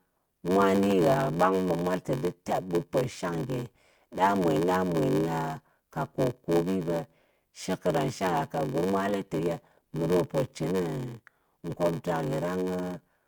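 Speech, with a block size mismatch (padded) running throughout. A steady buzz near 93.8 Hz sits under the whole recording, and the talking runs at 0.861 times normal speed while keeping its natural timbre. The buzz rate fits a stage reading 512-sample blocks, each arriving short and topped up with silence. The unchanged timbre is what separates this from a sample-rate mismatch, and the perfectly regular gaps rule out random buffer underruns.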